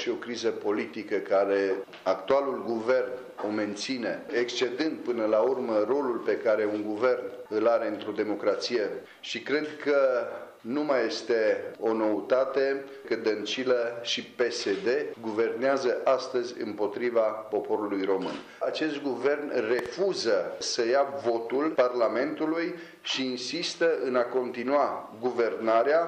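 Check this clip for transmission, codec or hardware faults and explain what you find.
Two loud pops are present: one at 2.31 to 2.33 s, roughly 15 dB above the sound, then a double pop at 19.79 to 19.88 s, about 10 dB above. Each is likely a voltage spike added on top of the sound, which continues underneath.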